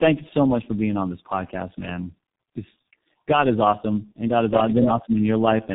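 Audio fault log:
Throughout, tandem speech coding: the speech went through two low-rate speech codecs in a row, roughly G.729A and then G.723.1, with a G.711 link between them. The second coder had to model the first one's artefacts, so the speech comes out rough, muffled and warbly. Nothing reaches above about 3.8 kHz.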